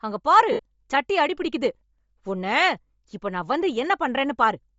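Throughout the speech there is a grainy, breathy edge on the voice, and the top of the band sounds hollow and hissy. That is likely Bluetooth LC3 compression at a low bitrate, which fits around 32 kbps. The codec discards upper detail and fills it with noise.

From 0.52 to 0.60 s, about 70 ms, there are lost LE Audio frames. The decoder repeats the last spectrum with scrambled phase. The voice smears into brief noise there. That length fits nine 7.5 ms frames.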